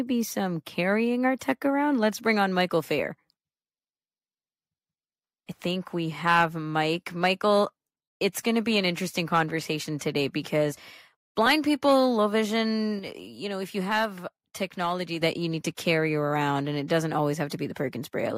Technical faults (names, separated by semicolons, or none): sudden gain jump